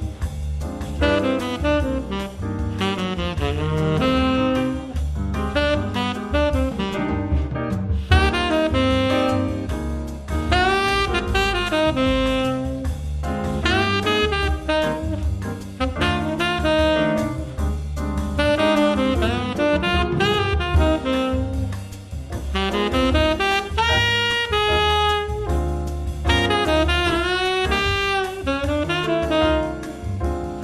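No technical faults turn up anywhere in this clip, so there's nothing to flag on this one.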